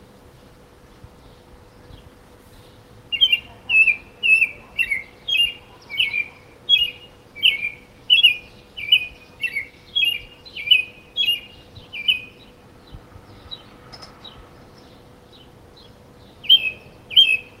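Nothing in this recording of everyday sounds gives a listener anything to flag, so there's no technical fault to walk through here.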